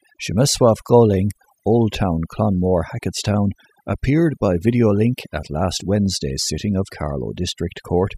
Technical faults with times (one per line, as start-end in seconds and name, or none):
0.00-8.17 overdone noise removal